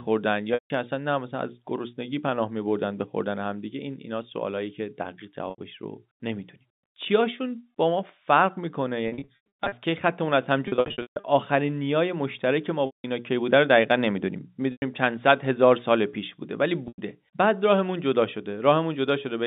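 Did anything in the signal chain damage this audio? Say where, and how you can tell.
Yes. Packet loss with pitch repetition occurred in the network. Short buzzy holds come at 5.5, 14.72 and 16.88 s. Longer gaps that fade into silence come at 0.54 and 12.86 s. Scattered bursts run from 9.08 to 9.72 s and 10.68 to 11.24 s. The receiver repeats the last pitch period, then fades it.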